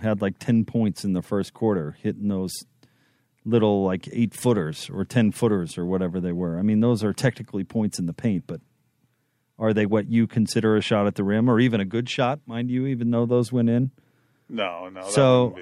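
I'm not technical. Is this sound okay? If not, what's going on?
Yes, it sounds fine, with nothing wrong to worry about anywhere in the recording.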